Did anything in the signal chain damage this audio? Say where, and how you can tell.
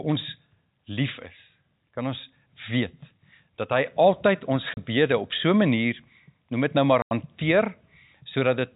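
Yes. Hard-edged dropouts at 4.74 s (30 ms, before "op so") and 7.02 to 7.11 s (90 ms) show network packet loss filled with silence, which fits 30 ms packets.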